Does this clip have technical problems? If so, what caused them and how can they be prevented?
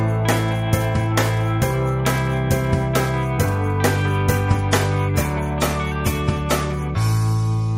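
Yes. An adaptive stream at a lower bitrate takes over at 4.31 s and runs to the end. The quality drops suddenly with no gap: the top end thins, nothing is left above 16.1 kHz, and compression artefacts grow audible. The player switched to a cheaper encoding because the connection slowed, and the sound points to MP3 falling from about 128 kbit/s to 48 kbit/s. More buffering or a higher minimum bitrate would prevent the drop.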